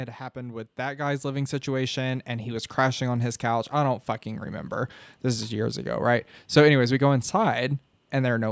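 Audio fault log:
0.33–2.79 s, automatic gain rising: the AGC heard a quiet input and eased its gain up about 10 dB, so voice and background swell together before "on his couch I".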